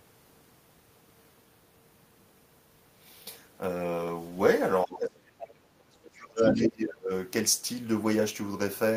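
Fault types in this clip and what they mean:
Speech suppressed in double talk: From 4.85 to 7.11 s the speech dips sharply, by about 30 dB at its deepest. An echo canceller likely turned it down while both sides talked.
Other side's voice leaking through: A second voice breaks in from 6.46 to 6.65 s, nearly as loud as the talker. It is likely loudspeaker echo the canceller failed to remove.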